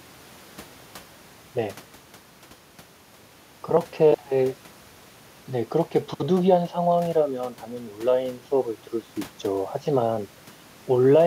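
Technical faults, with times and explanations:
No technical faults can be heard in this speech clip.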